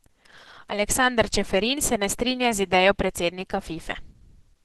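Opus compression runs through the entire clip. The speech has nothing above 12 kHz and sounds muffled, hoarse and grainy. This suggests a bitrate around 12 kbps that likely forced the encoder into its hybrid speech mode, narrowing bandwidth and roughening detail.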